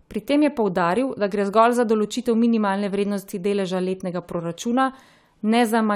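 No technical faults are audible.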